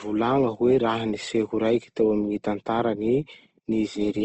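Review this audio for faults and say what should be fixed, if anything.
Opus compression likely accounts for the damage heard across the whole speech clip. The sound turns grainy and rough rather than swirly. Energy stays present in every band, but the detail inside the bands is smeared into noise, and nothing survives above about 8.1 kHz. That pattern points to the codec's music mode at a low bitrate, around 16 kbps. An MP3 at a similar rate would leave holes that warble and swirl. A plain low-pass filter would cut the top without adding grain. To prevent it, encode at a higher bitrate or keep an uncompressed source for this material.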